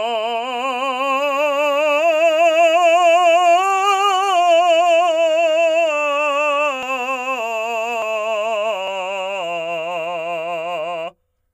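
Dropped buffers at 6.83, 8.02 and 8.88 s: each is a place where the music jumps ahead, with about 0.1, 0.15 and 0.1 s lost, likely from overruns.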